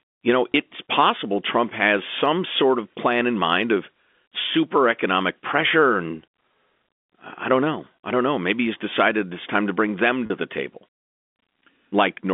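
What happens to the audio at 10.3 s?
A brief buzzy held tone from 10.26 to 10.30 s: packet loss with pitch repetition, the last pitch period looped to cover a 40 ms gap.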